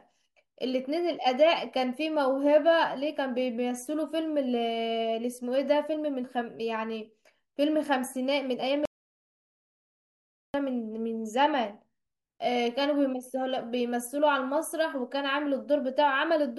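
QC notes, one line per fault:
8.85–10.54 s, audio dropout to silence: input likely lost while recording continued, so speech cuts off into 1.69 s of dead silence without room tone.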